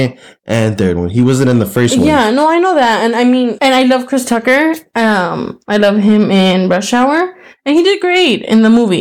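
Hard clipping runs throughout. The speech is driven about 5 dB past what a stage can pass, so around 2 percent of samples have their peaks cut flat. This adds high harmonics, heard as abrupt crackle on loud syllables, unlike the gradual thickening of soft saturation.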